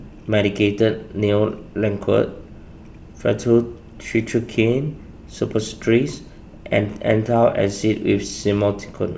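Nothing in the speech stood out as a technical fault on listening.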